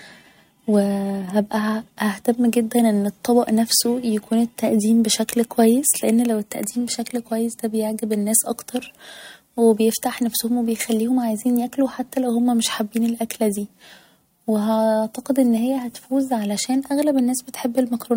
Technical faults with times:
0.22-18.12 clock slip clicks

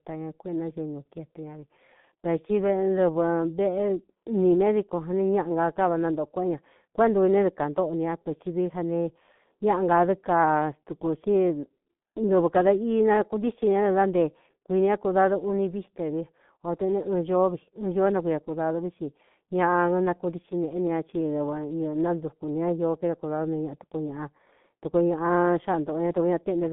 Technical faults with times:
0.00-26.73 G.723.1 codec

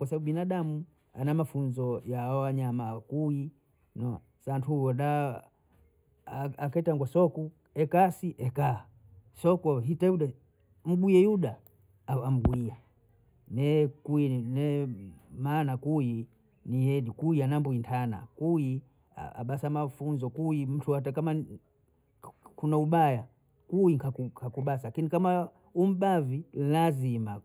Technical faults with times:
0.00-27.45 channel delay (comb filtering)

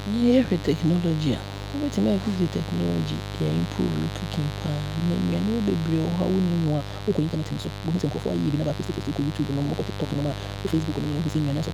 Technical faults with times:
0.00-11.73 mains buzz
6.62-11.73 time-stretched section

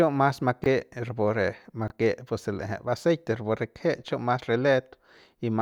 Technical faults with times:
0.62-0.66 chunks out of order
1.88-1.92 chunks out of order

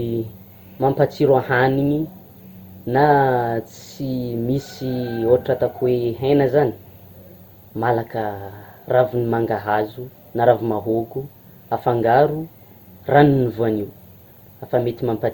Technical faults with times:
0.00-15.33 generation loss

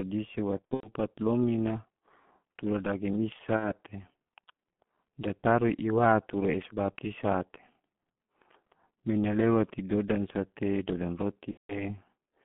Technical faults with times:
0.00-12.45 G.723.1 codec
0.59-0.91 VoIP packet loss concealed by the speech codec
3.56-3.73 VoIP packet loss concealed by the speech codec
11.51-11.84 VoIP packet loss concealed by the speech codec

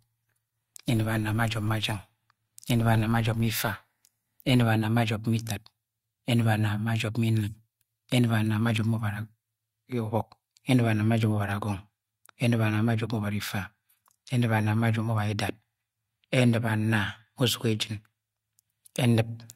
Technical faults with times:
0.00-4.64 filter restarted on every block

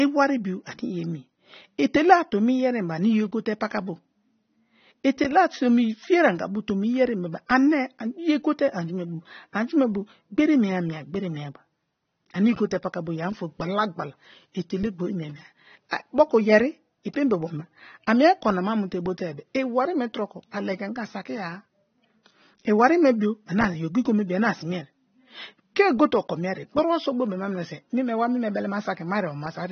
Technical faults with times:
0.00-29.72 AAC compression

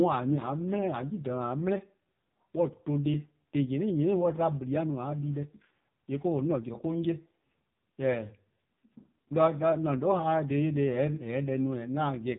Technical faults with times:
0.00-12.38 AMR narrowband mobile codec

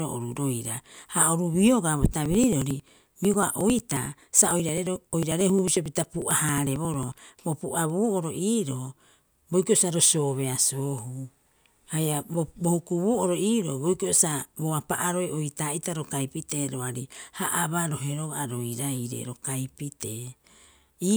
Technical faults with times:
2.26-7.12 periodic USB or driver dropouts

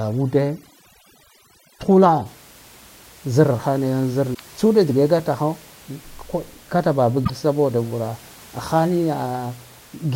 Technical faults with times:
0.00-2.26 overdone noise removal
4.31-4.40 damaged data in a compressed stream
7.21-7.30 damaged data in a compressed stream

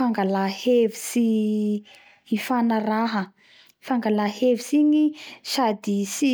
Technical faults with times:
none

